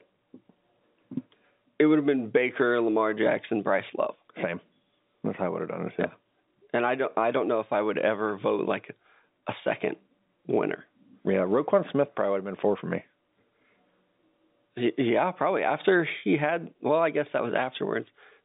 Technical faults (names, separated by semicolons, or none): none